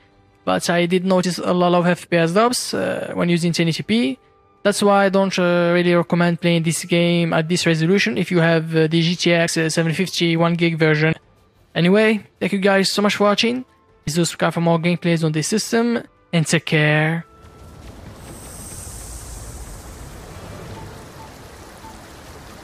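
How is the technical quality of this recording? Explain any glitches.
The recording has repeated dropouts where the audio briefly jumps forward. Compressed frames are skipped at 1.23, 9.47, 11.11, 14.06 and 16.06 s, each heard as the sound jumping abruptly further along. Whole compressed frames went missing or were rejected as damaged, so playback leaps ahead by somewhere between a few tens of milliseconds and roughly a tenth of a second or more.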